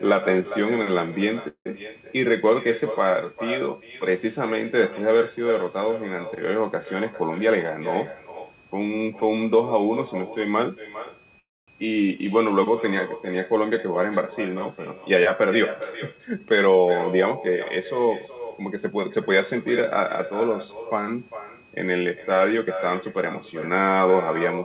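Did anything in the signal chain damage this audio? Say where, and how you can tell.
Yes. A switching supply whistle in the analogue power or wiring stage leaves a faint steady tone drifting between 2.4 and 2.6 kHz, roughly 35 dB below the speech.

An echo with no canceller in call processing shadows all speech with a copy about 13 dB quieter, roughly 0.4 s later, picked up from the far loudspeaker.

A call audio freeze occurs at 1.48–1.67 s and 11.39–11.70 s, where sound trails off into silence and then resumes intact, likely from packets stalling in the network.

A jitter buffer speed-up at 15.83–17.55 s, 17.99–19.66 s and 22.58–24.09 s runs speech 6–7% faster at unchanged pitch as pitch periods are trimmed.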